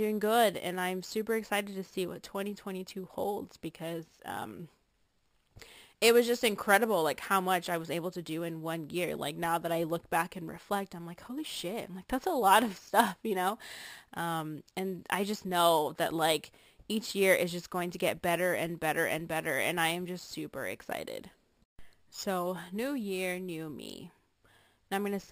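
Throughout, imaging from sample-and-hold upsampling repeats samples unfiltered, which fits a 12 kHz source, mirroring the speech into 6 to 12 kHz about 16 dB down as metallic fizz.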